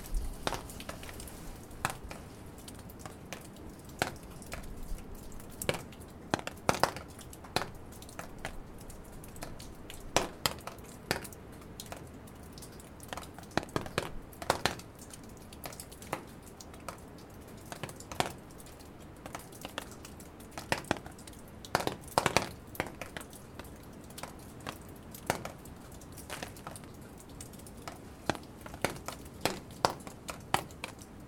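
No technical faults can be heard anywhere in the clip. Nothing in the audio calls for a timestamp or a repair note.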